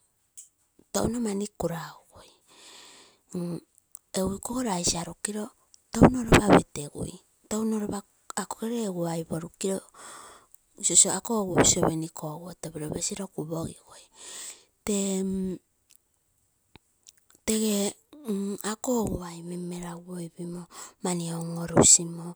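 Listening to this speech recording, nothing technical stood out as a problem at any point.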